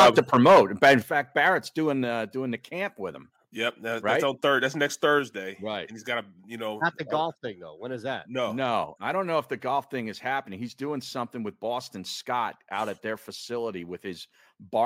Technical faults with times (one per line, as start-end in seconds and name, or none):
0.00-0.95 microphone overload
1.02 microphone volume stepped down
2.04 microphone volume stepped down
5.19 microphone volume stepped down